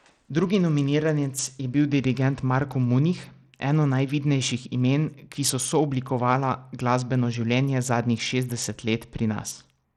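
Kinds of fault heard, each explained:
Bluetooth SBC compression: Across the whole speech clip the treble sounds dulled and unstable, with a gritty noise and aliasing riding on the sound. This points to SBC coding that starves the upper sub-bands of bits, likely at a rate near 80 kbps. On a spectrogram the high bands look patchy and flickering, full of speckled quantisation noise rather than smooth energy. The waveform gives little sign, since the damage is spectral.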